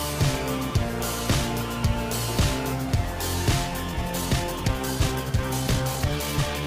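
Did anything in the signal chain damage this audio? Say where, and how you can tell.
Yes. From 3.87 s to the end at 6.66 s there is a time-stretched section: a software time-stretch, likely applied while editing or rendering the file, compressed that stretch so it plays 1.59 times faster than the audio before it. The algorithm keeps pitch unchanged by discarding short slices of the waveform rather than resampling, so at 3.87 s the pace abruptly turns rushed while the pitch stays exactly where it was.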